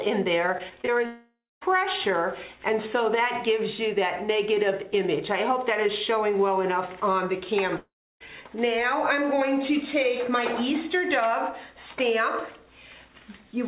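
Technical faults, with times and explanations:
0.58–0.90 s, repeated packet loss (robotic sound): four short holes in about a third of a second, the longest around 24 ms, with roughly 80 ms gone in total. Each one gets patched by stretching the last bit of audio, and then the next hole arrives almost immediately. About a quarter of that stretch is filler rather than real signal, so it comes across choppy and a bit robotic, with small chunks missing.
1.06–1.63 s, long network dropout: the audio stops arriving for a bit over half a second, about 560 ms. You hear the last sound get dragged out and fade away, and the final 230 ms or so is just silence before the audio picks up again further along, with the middle simply gone. The likely cause is a network stall rather than anything at the source.
7.77–8.22 s, long network dropout: same pattern again, about 440 ms missing this time. The held-over tail is shorter and the silence longer, roughly 310 ms, before the audio resumes past the lost part.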